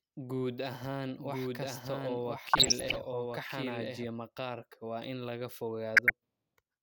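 Speech runs with a second, dry copy about 5 dB quieter trailing roughly a second behind from 1.19 s to 4.07 s, just before "maqaarka waa in laga"; this doubled audio track likely comes from a slower second capture path. Short blips of noise in single sub-bands appear at 2.42–2.97 s and 5.94–6.10 s, right after "maqaarka waa in laga". This DAB burbling points to bit errors of around half a percent getting past error correction into the MP2 frames.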